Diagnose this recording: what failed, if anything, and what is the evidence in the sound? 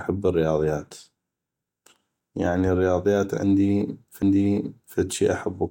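A CD skip at the playback stage: right after "يعني الرياضيات", at 4.22 s, a tick and a very brief mute, then the speech resumes from another disc turn, unlike a dropout.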